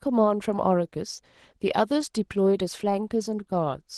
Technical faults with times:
0.00-3.98 Opus voice compression

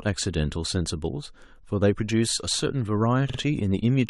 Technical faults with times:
3.29-3.38 repeated frames

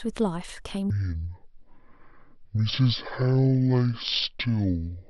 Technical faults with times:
0.90-5.10 stereo read as mono

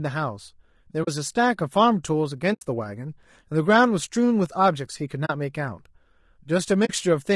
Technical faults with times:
0.00-7.35 low-delay AAC compression
1.03-1.08 AAC frame loss with muting
2.53-2.62 AAC frame loss with muting
5.25-5.30 AAC frame loss with muting
6.85-6.90 AAC frame loss with muting

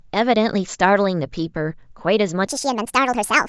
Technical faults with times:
2.47-3.48 wrong sample rate

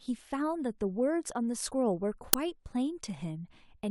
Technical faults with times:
2.33 uninitialised buffer

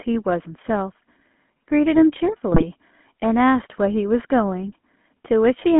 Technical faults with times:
0.00-5.80 GSM full-rate codec
2.52-2.67 GSM bit errors

